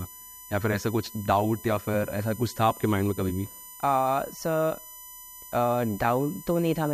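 A speech recording with USB whine running its full length: a steady, fixed-pitch tone built on 1 kHz and its harmonics, loudest at 12 kHz, sitting roughly 20 dB below the speech. Mains hum or a ground loop would instead sit at 50 or 60 Hz and its multiples. The exact 1 kHz spacing matches the bus's 1 ms frame timing, with current draw leaking through power or ground into the audio path.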